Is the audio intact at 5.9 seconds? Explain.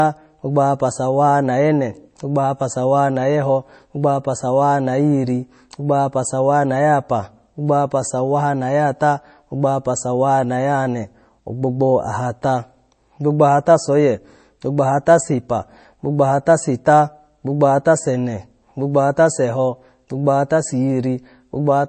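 No, at 5.9 seconds, as throughout the speech, the damage is likely MP3 compression, consistent with a low bitrate near 32 kbps. Starved of bits, the encoder removes everything above 8.3 kHz and drops weak frequency lines frame by frame, giving a dull, watery, swirling sound with smeared consonant attacks.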